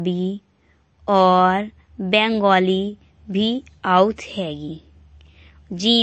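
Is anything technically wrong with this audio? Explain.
Yes. The speech carries MP3 compression artefacts throughout. Nothing is audible above 8.3 kHz, so the treble stops at a hard ceiling. The damage is plainly audible. The likely cause is a starved MP3 encoder. With too few bits, it drops the top band and zeroes weak frequency lines. Those lines switch on and off from frame to frame. The result is a watery, swirly texture, with smeared consonant attacks. This fits a low bitrate of around 34 kbps.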